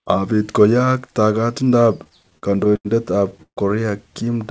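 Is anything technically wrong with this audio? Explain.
Yes, two call-network problems show up in this speech.

Repeated stalls (stutter) run from 2.04 to 2.87 s, right after "koyaak taagatindo ap". Packets kept arriving late, so the jitter buffer drained about ten times and the receiver stretched the last sound to fill the holes. That adds roughly 210 ms, the longest hold about 87 ms, and about a quarter of the stretch is filler. It drags and stutters, but nothing's actually lost.

A call audio freeze follows at 3.43 to 3.59 s, likely from packets held up in transit. The receiver carried the last sound on for about 140 ms, fading to silence for about 80 ms, then picked up exactly where it left off. That shows up as a short inserted gap rather than a dropout. The audio stops at 8 kHz throughout, which fits a wideband call codec like G.722.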